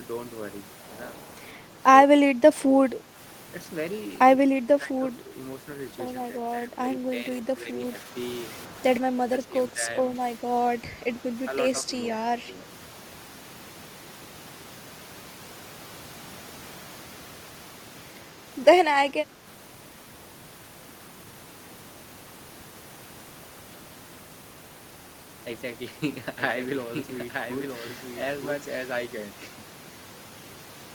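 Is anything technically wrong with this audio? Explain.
Yes. Two faults are audible.

Speech suppressed in double talk occurs at 2.05–3.16 s, 4.48–5.31 s, 6.35–8.15 s, 8.69–9.83 s and 11.87–12.53 s. The echo canceller likely mistook overlapping far-end talk for its own loudspeaker echo and attenuated the near-end signal along with it. The voice dips in brief patches, roughly half a second within most stretches and only a moment in the last, by about 5 dB, reaching about 10 dB in the second and fourth.

A doubled audio track runs from 26.37 to 28.95 s. A second, slower capture path or a misaligned edit likely mixed in another copy of the same speech, trailing by about a second and sitting about 5 dB below the original. The copy is full-band and dry, with no reverberant tail, so it sounds like a clean overlapping repeat that starts and stops abruptly.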